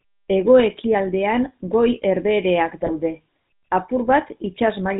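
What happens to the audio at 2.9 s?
GSM bit errors strike from 2.82 to 2.91 s. Corrupted bits reach the decoder and scramble the filter, pitch and gain values it rebuilds each frame, so across roughly four 20 ms frames the speech bends and jumps in level, breaking into a brief squawk and gargle. Underneath, and throughout the clip, runs the GSM full-rate codec, whose sound fits its 13 kbps rate. Pulse-driven vocal-tract modelling and a cut-off at 4 kHz leave the speech plainly buzzy and gravelly, with no high-frequency content.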